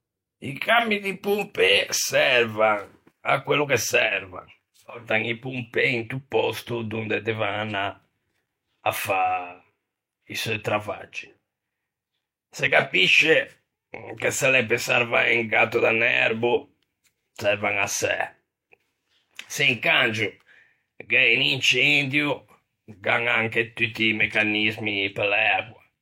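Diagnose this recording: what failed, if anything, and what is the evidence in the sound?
Listening through the speech recording, nothing stood out as a failure at any stage of the chain.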